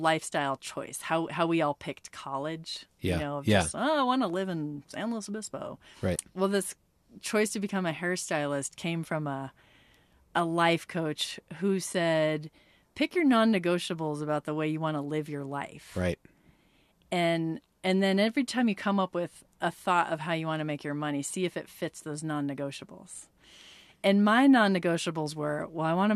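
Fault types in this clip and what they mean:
Nothing stood out on listening through the speech in this clip.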